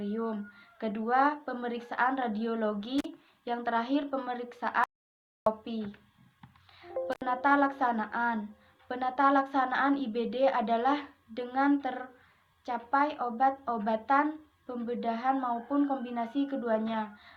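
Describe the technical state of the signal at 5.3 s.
At 5.3 s the signal sits inside an audio dropout to silence running from 4.84 to 5.46 s, roughly 0.62 s of missing material. The sound stops abruptly and resumes just as suddenly, with no room tone in between. The likely cause is a lost input, such as a disconnected device or failed link, while the recorder kept writing silence. The waveform shows a flat line, and the spectrogram a dark band across all frequencies.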